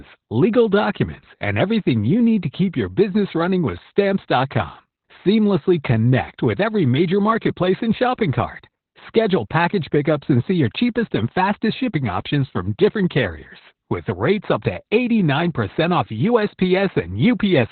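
Speech throughout the whole clip carries heavy Opus voice compression. Everything above about 4.4 kHz is gone, so the voice sounds muffled and boxy, like a phone line, and the coarsely coded excitation leaves it hoarse and slightly robotic. This points to the SILK coder running narrowband at a very low bitrate, likely around 8 kbps. A spectrogram would show a flat ceiling near 4.4 kHz with nothing above it, and blurred, smeared harmonics below.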